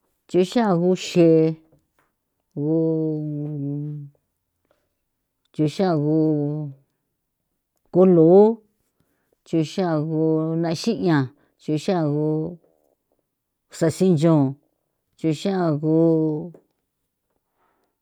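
No technical faults are audible anywhere in the speech recording.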